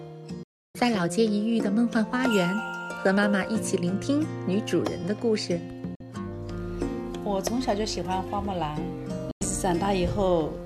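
Three digital broadcast dropouts mute the audio at 0.43–0.75 s, 5.95–6.01 s and 9.31–9.42 s, where the receiver lost frames and silenced output until good ones returned. Each shows as a flat waveform gap and blank spectrogram column with 3 ms fades.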